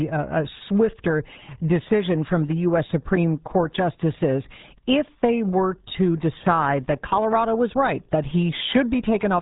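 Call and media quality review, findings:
RealAudio 14.4 codec artefacts throughout the speech. Nothing passes above 3.8 kHz; muffled, gargly, watery texture from heavy low-rate parametric coding, which fits an 8 kbit/s RealAudio 1 stream. Probable component: legacy dial-up-era encode upstream of playback.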